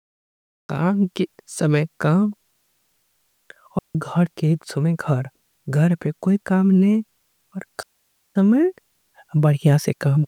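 The speech opens with a cut-off start: the first 0.69 s is digital silence, and at 0.69 s the audio jumps in mid-sound, with no attack and no fade-in. Capture began after the talker was already producing sound, so the onset is truncated. On a waveform this is a flat silent line that steps straight to the signal. A spectrogram shows blank space, then a hard vertical edge where energy appears.

Two digital wireless dropouts follow, at 3.79 to 3.95 s (about 164 ms) and at 7.83 to 8.36 s (about 529 ms). Each time, the receiver lost too much of the link's data and muted briefly, giving clean holes of near silence with no noise bursts on either side. The waveform narrows to a thin line through each gap, with short tapered edges from the quick mute fade. The spectrogram shows empty vertical bands, the second much wider than the first.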